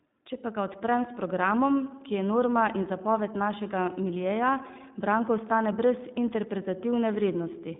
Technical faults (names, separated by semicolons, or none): iLBC codec